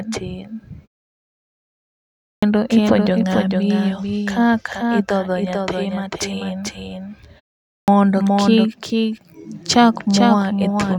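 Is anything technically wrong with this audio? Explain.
Yes, there are two faults.

Doubled audio track, throughout: every sound is followed by a full-band copy, about 5 dB quieter and roughly 400 ms behind, with no room colour or decay. This is likely a second capture of the same signal arriving through a slower path and mixed back in.

Clipped start after a pause, at 2.26 to 2.43 s and 7.72 to 7.88 s: after silences of 1.47 s and 0.4 s, the speech resumes abruptly with about 0.16 s missing, first just before "ipuonjo ng'a miyo kaka". The output device sleeps during silence and needs time to wake, so the opening sounds are lost.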